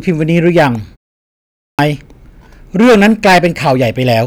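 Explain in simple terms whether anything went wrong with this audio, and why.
Two things went wrong. The first is hard clipping, present through the whole recording. The speech was pushed well past the loudest level the equipment could handle, so the tops of the loudest moments were sliced off flat. Only a small share of the sound crosses that limit, around one part in twenty, but every time it does you hear a rough, crackly fuzz on the louder syllables instead of a clean sound.

The second is a clipped start after a pause. After a silence of about 0.6 seconds, the playback device had gone idle and took time to wake up again. Because of this, the first 0.29 seconds of the sound returning at 1.5 seconds never came out. The speech restarts abruptly at about 1.79 seconds, with its opening sounds cut off. The silence itself dropping fully quiet during the gap is normal and not part of the problem.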